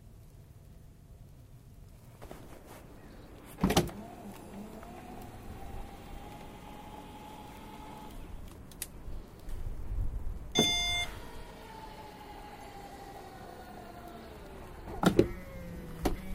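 At 3.88 s and again at 7.72 s a brief glitch cuts into the sound, each lasting under 20 ms. This is damaged data in a compressed stream: bytes in the encoded file were lost or overwritten, so the decoder misread those frames and had to resynchronise on the next valid frame header.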